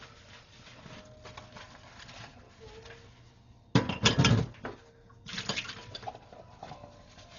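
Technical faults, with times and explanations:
Throughout, Dolby Digital compression: the whole clip sounds dull, with nothing above 6.9 kHz, and there's a rough, fluttering noise hanging around any steady tones. The damage is heavy, and the likely cause is a very lean AC-3 encode, one that fits a bitrate of roughly 40 kbps. At that rate the encoder narrows the band and leaves many frequency lines without mantissa bits, so the decoder fills those gaps with dither noise, which is the grainy flutter you hear.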